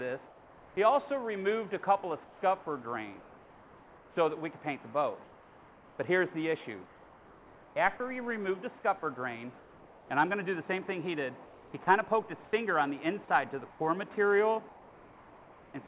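The audio comes through a narrowband call path with nothing above 4 kHz, which fits G.711 mu-law at 64 kbps. Comfort noise in place of the background appears at 0.26–0.77 s and 9.59–10.1 s, each about 3 dB quieter than the real background, and in pauses totalling 2.82 s within 2.24–8.0 s and 1.5 s within 11.45–15.74 s. The likely cause is discontinuous transmission, where the receiver fills silent gaps with synthetic noise. Sound dropped by the voice detector occurs at 7.97–8.00 s, where about 20 ms of sound gives way to noise, likely because the detector misjudged it as background.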